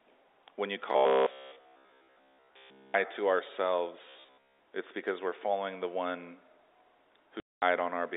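From 0.92 to 2.94 s the speech turns into a rigid metallic buzz at 66.7 Hz, and again from 4.09 to 4.59 s, just before "it's because we're following". This robotic sound most likely comes from repeating short buffers of about 15 ms, during most of the first stretch and all of the second. At 7.40 s the audio drops into a 220 ms hole with hard edges, packet loss filled with silence, which fits eleven 20 ms packets.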